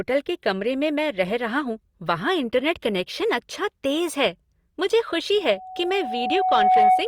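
At 5.37 s a microphone starts picking up the loudspeaker it feeds, and the loop gain at 745 Hz climbs past one. The result is loudspeaker feedback squeal: a single 745 Hz tone swelling over roughly a second and a half to about 10 dB above the speech, continuing to the end.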